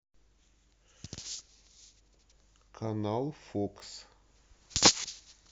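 At 3.80 to 3.82 s a brief click-like stutter breaks the speech: a repeated buffer, where late audio made the device replay one 20 ms block, losing about 20 ms.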